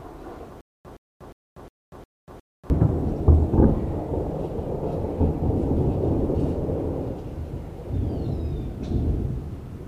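From 0.61 s to 2.7 s there's a stutter with silent gaps: the same 117 ms burst of sound plays six times, each followed by about 240 ms of dead digital silence, so it ticks along evenly at roughly one repeat every 358 ms. That pattern likely comes from a player or stream stalling, replaying its last buffered fragment on each retry, then running dry. Whatever should have played during those two seconds is simply gone.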